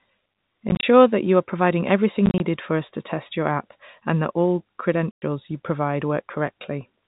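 Packet loss filled with silence occurs at 0.69–0.83 s, 2.26–2.4 s and 5.11–5.22 s. Lost packets, consistent with 10 ms each, become hard-edged gaps.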